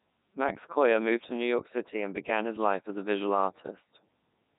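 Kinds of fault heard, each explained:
Codec 2 vocoder: the speech was stripped down to pitch, voicing, energy and a rough spectral envelope, then rebuilt from sine waves instead of the original waveform, a heavy loss that fits the 3.2 kbit/s mode, so it sounds robotic and buzzy throughout.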